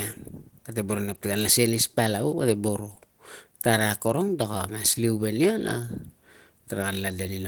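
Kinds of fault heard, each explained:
Opus compression: the speech sounds hoarse and grainy throughout while still reaching about 20.1 kHz, likely from Opus in hybrid mode at a low rate around 16 kbps.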